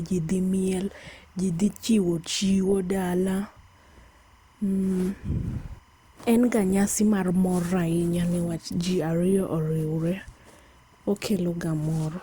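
Timecode bleed runs throughout the speech. Linear timecode from an adjacent track or cable leaks into the audio path. Its square wave flips between tones near 1 and 2 kHz, which fits 25-frame code, and it is heard as a steady chirping warble far beneath the voice.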